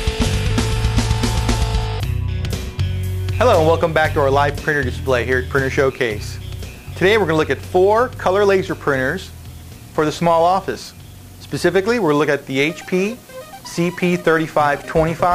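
Crude rate conversion runs through the whole clip. The pattern points to a drop from 48 kHz to 44.1 kHz by simply keeping the nearest sample, with no smoothing filter. That skips samples in a repeating cycle set by the two rates, producing shifted, inharmonic copies of the material, roughly 30 dB below it. The result is a gritty, inharmonic fizz riding on the louder and brighter moments of the sound.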